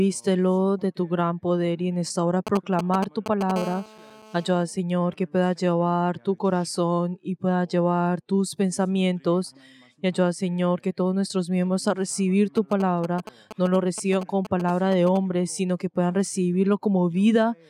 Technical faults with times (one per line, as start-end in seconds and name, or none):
2.47-3.52 GSM signalling bursts
3.56-4.63 GSM phone buzz
12.57-15.17 GSM signalling bursts